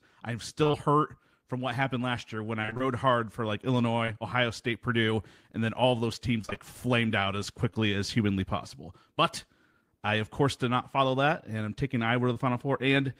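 Speech, with packet-loss faults. Repeated packet loss gives a choppy, robotic sound at 0.63–0.75 s, 2.61–2.82 s and 6.41–6.58 s, where about half of each stretch is patched-over gaps. Short concealed packet loss causes brief smears at 7.70–7.77 s, two back-to-back 20 ms holes, and at 12.33–12.37 s.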